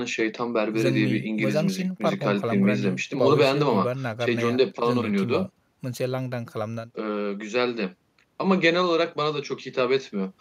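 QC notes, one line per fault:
Nothing to flag on this one; I listened through the speech and didn't hear a single technical fault worth noting.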